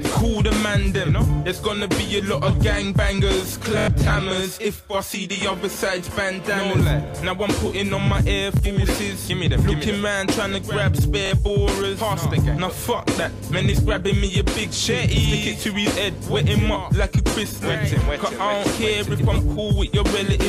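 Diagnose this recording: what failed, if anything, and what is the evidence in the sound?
The playback path failed at the driver or buffer stage with a repeated buffer. At 3.79–3.88 s one slice of about 23 ms sounds five times in a row. At 8.57–8.59 s a slice plays twice, and at 11.26–11.31 s it plays three times. Each is a short stutter with hard joins. The repeat period fits a 1024-sample buffer. On a waveform, identical blocks sit side by side with a step discontinuity at each join. A spectrogram shows thin vertical broadband lines at a regular 23 ms spacing. The device replayed stale data when fresh audio arrived late, losing roughly a tenth of a second at 3.8 s.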